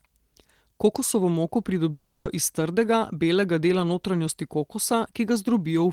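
A long network dropout runs from 1.91 to 2.27 s in this speech clip. For about 340 ms the sound turns into a smeared, fading buzz that stretches the last moment before the gap, with no fall to silence, and then the speech resumes at "iz trdega belega dela" with that stretch missing. The likely cause is a run of audio packets that never reached the receiver, which filled the hole by extending what it had last played.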